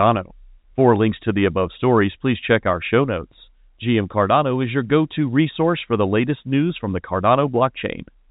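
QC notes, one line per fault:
No faults found; telephone-band speech, nothing above 3.8 kHz.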